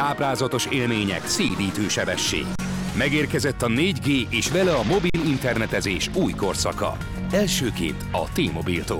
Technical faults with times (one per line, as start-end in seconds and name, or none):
1.49 underrun with held sample
2.55-2.59 underrun with held sample
5.10-5.14 underrun with held sample